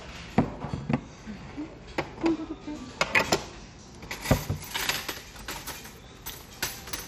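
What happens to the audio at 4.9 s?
At 4.9 s, as throughout the clip, the audio carries what is likely MP2 compression damage: upper sub-bands starved of bits drop in and out and the remaining bands are coarsely quantised, giving a dull, gurgling, granular texture with nothing above 17.4 kHz, which points to a low bitrate around 64 kbps.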